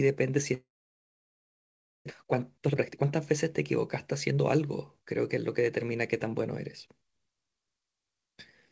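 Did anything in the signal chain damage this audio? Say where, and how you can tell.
Yes, the network side of the call. From 0.54 s to 2.11 s the sound smears into a fading buzz, then roughly 1.4 s of near-silence, and resumes with about a second gone. That's likely a long network dropout, with the receiver concealing the gap before giving up.

Right after, the jitter buffer speeds up to drain the backlog: 2.19 to 3.66 s runs at 126% with around 0.4 s trimmed, then 4.31 to 5.86 s at 107%, about 0.1 s. The pitch holds but the speech sounds hurried, because small pitch-period chunks are being cut out. Nothing above 8 kHz fits the G.722 call codec.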